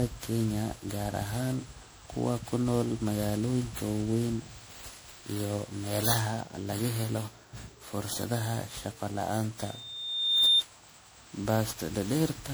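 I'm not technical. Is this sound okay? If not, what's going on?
No. The speech has generation loss from start to finish. It sounds swirly and hollow, and the starts of sounds come out blurred rather than crisp. The likely cause is that the recording was saved in a compressed format like MP3 and then re-saved roughly ten times over. Each save throws away a little more detail in slightly different places, so the small damage from every pass piles up into this smeared, watery quality.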